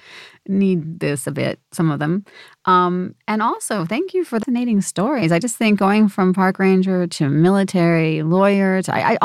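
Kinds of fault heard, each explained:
CD skip: at 4.43 s, just after "also thank you for", a tick and a roughly 10 ms mute, then the speech picks up at "stories I just think" from a different point, because the laser jumped to another turn of the disc's spiral.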